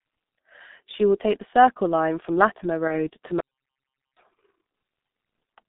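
Throughout, the speech carries heavy G.723.1 codec damage: band-limited to about 150 Hz to 3.7 kHz, muffled and hoarse with smeared consonants, consistent with a roughly 6.3 kbit/s rate. From 2.87 to 3.05 s, VoIP packet loss concealed by the speech codec: one 30 ms frame went missing, the decoder extrapolated it into a brief, fading sound, and the speech stays weakened briefly afterward. From 3.40 to 4.17 s, an audio dropout to silence removes about 0.76 s as silence with no room tone, likely from the input signal being lost while recording continued.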